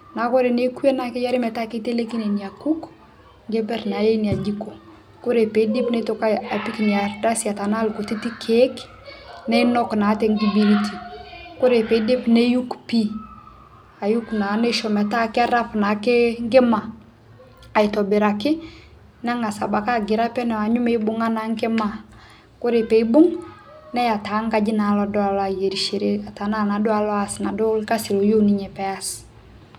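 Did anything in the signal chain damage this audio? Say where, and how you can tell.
No, nothing in this speech recording stood out as a problem on listening.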